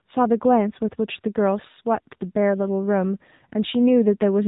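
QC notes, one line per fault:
Throughout: AMR narrowband mobile codec. Nothing above 3.8 kHz survives, so sibilants and consonant edges sound dull and boxy. Unlike a simple low-pass or telephone band-limit, the speech itself is rebuilt from a vocal-tract model fed by sparse pulses in short 20 ms frames. That gives it a plainly audible buzzy, synthetic grain. The degree of damage fits a low AMR-NB mode around 7.4 kbps.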